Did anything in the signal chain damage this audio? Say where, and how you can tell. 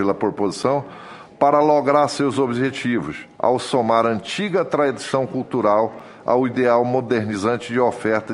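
Yes. Blocks of digital silence at 0.63 s and 6.00 s point to a driver or buffer underrun. The sound cuts out and back with no fade, giving hard-edged ticks or dips rather than a smoothed, concealed network loss. The second gap, about 5 ms, fits a 256-sample buffer.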